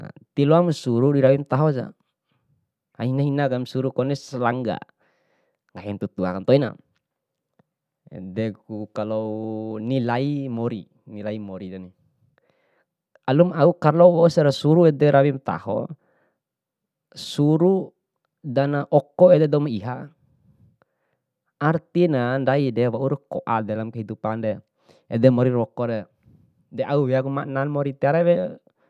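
No technical faults are audible.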